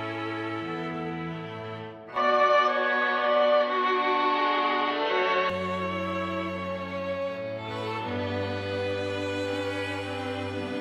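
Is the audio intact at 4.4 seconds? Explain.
No, at 4.4 s the sound is in the middle of a dull, boxy stretch from 2.16 to 5.50 s. Nothing comes through above 6.1 kHz, the level shifts by about 5 dB, and a faint new background noise sits underneath, likely an input switched to a poorer device.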